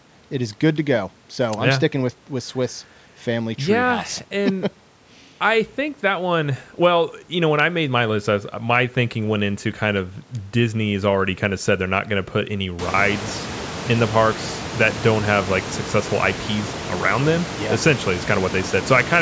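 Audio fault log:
No faults heard in this speech recording.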